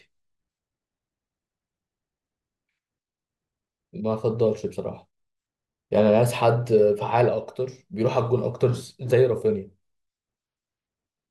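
No technical faults can be heard anywhere here.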